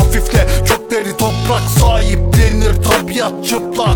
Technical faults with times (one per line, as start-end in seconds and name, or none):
0.80-3.95 time-stretched section